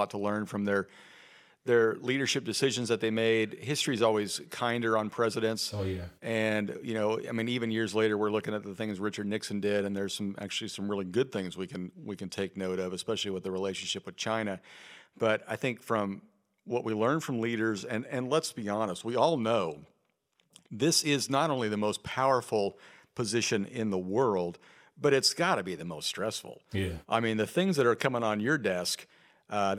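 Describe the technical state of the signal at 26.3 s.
At 26.3 s the speech signal is intact, with no audible dropout, clipping, distortion or other technical fault at that moment.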